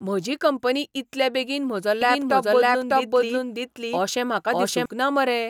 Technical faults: doubled audio track

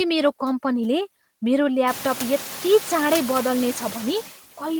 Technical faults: noise suppressor artifacts

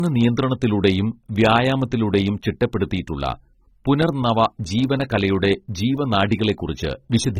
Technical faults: low-bitrate audio saved at a high bitrate

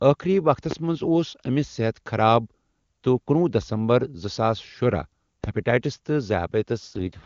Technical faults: loud pop; AMR rate drop

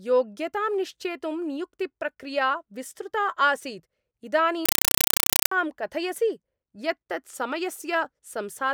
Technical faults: compressed stream played as audio

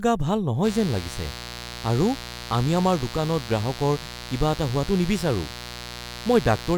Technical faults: mains buzz

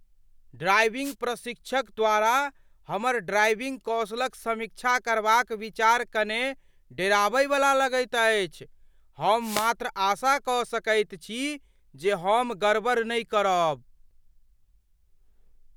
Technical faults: wireless microphone noise hit

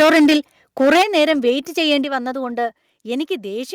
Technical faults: microphone overload; microphone volume stepped down

